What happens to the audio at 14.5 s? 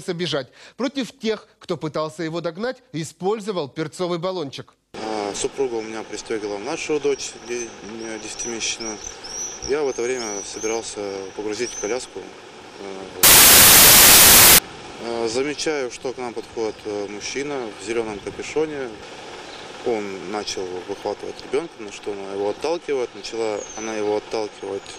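At 14.5 s the audio is near the end of a stretch of samples built from the wrong bytes, running from 13.23 to 14.58 s. The bytes of each sample are assembled misaligned or in swapped order, so the rapidly changing low bits dominate, producing loud, harsh broadband noise, close to white on loud sounds.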